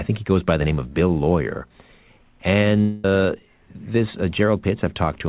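From 2.81 to 3.18 s the speech breaks off into a smeared, buzzy continuation of the last sound, lasting about 0.23 s, with no true silence before the voice returns at "this uh". The cause is likely a long network dropout: about 200 ms of audio never arrived, the receiver synthesised a stand-in, and playback ran about 30 ms later afterwards. Unlike a brief concealed packet loss, this filler runs long enough to be heard as a buzz or hiss that fades in place of the lost speech. The G.711 call path's 4 kHz band limit persists across the dropout.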